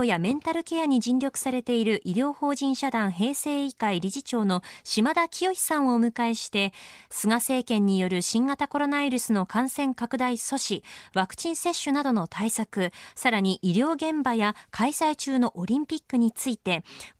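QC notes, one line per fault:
Nothing stood out on listening to the speech.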